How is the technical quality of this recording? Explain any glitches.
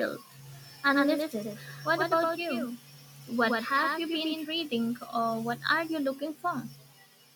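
The speech has one clear glitch: a doubled audio track from about 0.46 s to 4.48 s. For those four seconds a second copy of the speech runs roughly a tenth of a second behind the first, somewhat quieter. It's likely the same signal getting in twice, through a slower second path or two misaligned copies in an edit. The copy has no decay and no extra room sound, so it comes across as a hard slapback echo that switches on and off abruptly at both ends.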